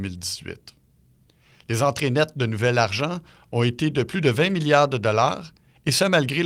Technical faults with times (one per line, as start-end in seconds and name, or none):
2.99-3.01 lost packet rebuilt from error correction
4.45-4.55 lost packet rebuilt from error correction